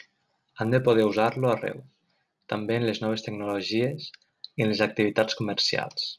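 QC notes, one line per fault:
Throughout, resampler restarted on every block: a steady 100 Hz buzz rides under the speech and drops away in pauses. The rate conversion, consistent with 48 kHz to 24 kHz, was run afresh on each 10 ms block, leaving a small error at every block edge.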